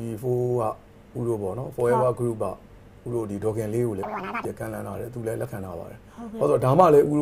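From 4.03 to 4.45 s, the audio was read two samples at a time (double speed): the reader treated each pair of samples as a single frame, as if the stream had two channels or wider samples. That stretch plays at 2x speed, an octave high.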